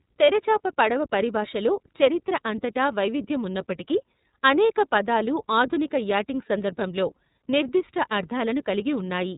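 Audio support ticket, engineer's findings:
Speech thin and band-limited throughout, nothing above about 3.8 kHz; rough, slightly synthetic texture, plainly audible. Probable component: iLBC codec in the VoIP path. Narrowband coding, each frame's excitation coded independently of the previous one; grain fits 30 ms frames, 13.33 kb/s mode.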